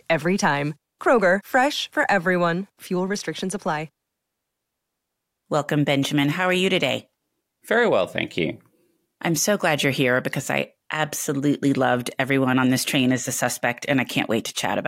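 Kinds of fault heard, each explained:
No faults can be heard.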